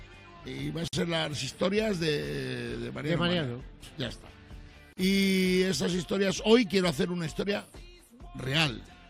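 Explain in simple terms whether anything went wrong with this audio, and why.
Gaps at a join of encoded pieces appear at 0.88–0.93 s and 4.93–4.97 s: brief silences from padding left where separately encoded chunks were stitched together.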